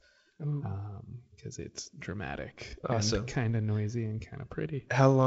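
Nothing here counts as a fault: the speech comes over a G.722 wideband telephone link at 48 kbit/s, so you get the light coding hiss that link brings and nothing above 7.7 kHz, which is just how it normally sounds.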